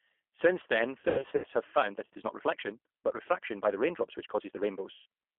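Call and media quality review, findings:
G.729 codec, whole call. Narrowband, nothing above 3.4 kHz or below about 250 Hz, rough, slightly synthetic texture. Clearly audible. 8 kbit/s CELP, G.729A flavour: speech rebuilt from a vocal tract filter, pitch predictor and sparse pulses per 10 ms frame.

VoIP packet loss concealed by the speech codec, 1.00–1.47 s. Buzzy, fading patches scattered across ~440 ms, about 260 ms missing in total, longest gap 100 ms. Decoder extrapolating last pitch and filter at dropping gain.

Same again, 4.92–5.06 s. One 140 ms hole smeared into decaying tone; recovery sluggish since each frame builds on the last.

Time-stretched section, 1.73 s to end. Pace jumps to roughly 1.51x, pitch unchanged, rushed. Likely time-scale software cutting short pieces to fit a length.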